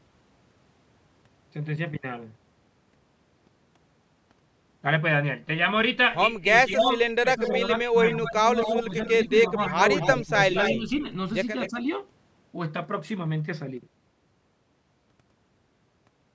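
From 6.53 to 11.04 s, the echo canceller, likely unable to tell the near talker from loudspeaker echo while both sides spoke, pulled its gain down. This is speech suppressed in double talk: the speech dips by about 10 dB in brief patches adding up to roughly a second, sounding ducked during the overlap.

Over nearly the same stretch, 6.72 to 11.02 s, there is an echo leak. A loudspeaker end's canceller likely failed to strip its microphone's pickup, so a copy of the speech returns about 260 ms late, roughly 10 dB below the direct voice. It sounds like a faint trailing repeat behind the speech.

A second echo leak follows at 11.6 to 11.7 s, likely from the same incomplete cancellation. This time the delay is 235 ms and the echo sits about 15 dB down, a short, faint scrap of repeated sound.

Immediately after, from 11.7 to 11.85 s, speech is suppressed in double talk again, likely as the canceller reacts to the renewed overlap. 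The speech drops by about 10 dB for roughly 70 ms, a quick dip. Throughout, the call's microphone band limit leaves nothing above 8 kHz.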